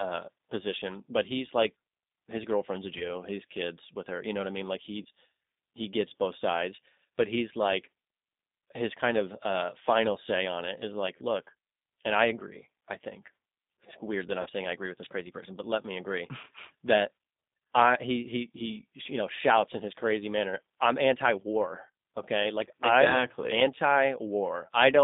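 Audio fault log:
throughout G.729 codec: the speech sounds narrow, slightly rough and synthetic, confined to a telephone band of about 200 Hz to 3.7 kHz with nothing above. The decoder rebuilds each 10 ms frame from a vocal tract filter, a pitch predictor and a handful of pulses rather than the original waveform. That approximation gives the plainly audible grainy, buzzy edge, and the character points to the low-complexity G.729A variant at 8 kbit/s.
2.98–3.10 s, 5.03–5.07 s, 14.42–14.49 s VoIP packet loss concealed by the speech codec: the speech briefly smears into a stretched buzzy tone or coloured noise that sags in level. A gap of 20 ms was lost at the first two points and 40 ms at the third, which fits one, one and two lost packets. The decoder filled each hole by repeating its last pitch and filter at falling gain. Because every frame builds on the one before, the damage lingers beyond the gap itself.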